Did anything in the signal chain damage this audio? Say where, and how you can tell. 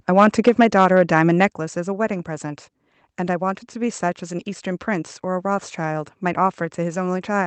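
Yes. From 0.18 to 1.46 s the loudest syllables turn harsh and crackly, with peaks pushed about 6 dB past the converter's limit and around 2 percent of samples flattened. This is likely microphone overload at the converter. On the waveform the peaks appear as flat-topped plateaus, and the spectrogram shows broadband splatter above them.

Twice the whole level, voice and background together, drops in a single step: about 3 dB at 0.49 s and about 5 dB at 1.5 s. The likely cause is call processing stepping down the microphone volume after the distorted peaks. The waveform envelope shows abrupt staircase drops rather than a gradual fade.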